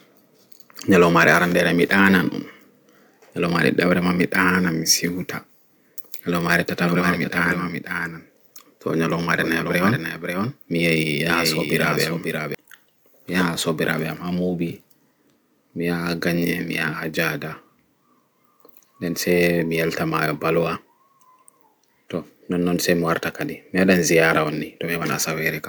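A doubled audio track runs from 6.51 to 12.55 s: a second, full-band copy of the speech trails about half a second behind, some 5 dB quieter, with no reverb tail, and it cuts in and out abruptly. The likely cause is a slower capture path mixing the same signal back in.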